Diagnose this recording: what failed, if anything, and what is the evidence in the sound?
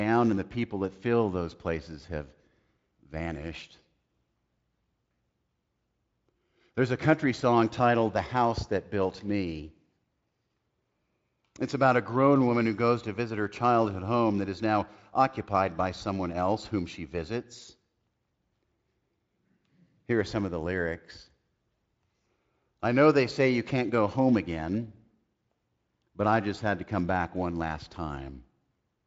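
Nothing in this speech recording stood out as a failure on listening.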